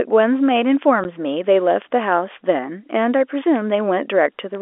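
Word clock ticks run from 0.33 s to 4.55 s, a string of about twenty sharp clicks spaced roughly every 0.3 s. The receiving device is running on its own clock rather than following the sender's, and the two drift apart by something on the order of 100 parts per million. Each time they slip past one another, a single sample is dropped or repeated, leaving a small step in the waveform that sounds as a tick. The strength of the ticks varies with whatever the speech is doing at that instant.

Packet loss filled with silence occurs at 1.04 s, a 10 ms hole in the speech. The gap fits a single lost packet that the receiver replaced with digital silence instead of concealing it. Because the sound drops to nothing and then resumes abruptly, the gap has hard edges. This gap sits among the clock ticks but is separate from them, and it has a brief dead moment instead of a single-sample jolt. The narrow telephone band of the G.711 line carries the sound on either side of this gap, adding at most faint noise of its own.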